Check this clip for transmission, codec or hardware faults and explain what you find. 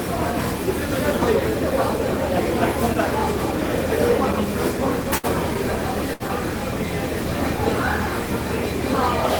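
Two short dropouts caused by burst of packet loss, at 5.17 to 5.26 s and 6.13 to 6.23 s. In each, the sound freezes into a brief held tone or hiss that fades over about 60 ms, then jumps ahead. A run of lost or late packets left a hole. The receiver extended and faded the last sound it had, and playback resumed past roughly 60 ms of audio that never arrived.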